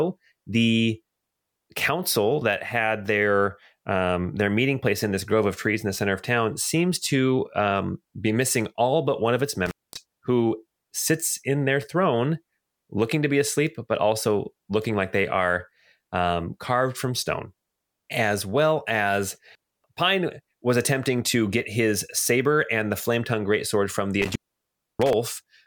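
At 9.66 s and again at 24.22 s, the speech cuts out from intermittent contact. A loose connection opens briefly, about 0.22 s then 0.64 s, with crackle and faint hiss.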